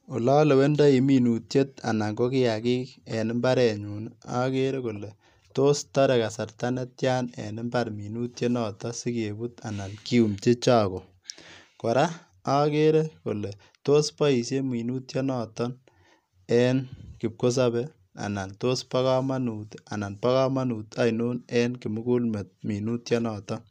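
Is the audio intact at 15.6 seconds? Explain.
Yes, the speech at 15.6 seconds is intact, with no audible dropout, click, distortion or other fault at that moment.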